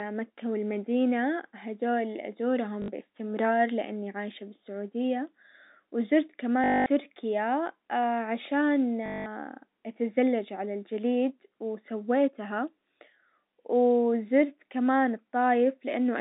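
At 2.82 to 2.88 s, then 6.64 to 6.86 s and 9.06 to 9.26 s, the speech hits packet loss with the last packet repeated. The receiver ran dry and kept replaying its final chunk of audio until fresh data came. The first gap lasts 60 ms and is a brief stutter. The two longer ones, 220 and 200 ms, turn into a robotic buzz near 50 Hz, which fits 20 ms packets. The narrow telephone band of the G.711 line comes through as expected.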